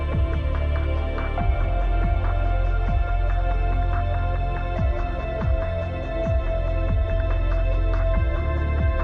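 No technical faults can be heard anywhere in this recording.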